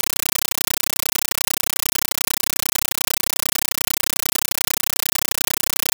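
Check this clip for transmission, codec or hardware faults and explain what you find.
One fault is present, and it runs through the whole clip. Compressed stream played as audio, from start to end: an undecoded Dolby Digital (AC-3) bitstream is output as ordinary samples. Each frame becomes a 9.33 ms noise burst plus silent padding, 31.25 times a second, replacing the speech with loud, chattering static.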